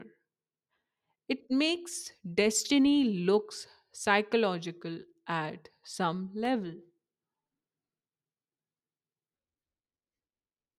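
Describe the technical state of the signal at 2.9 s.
At 2.9 s the speech signal is intact, with no dropout, clipping, glitch or other fault audible at that point.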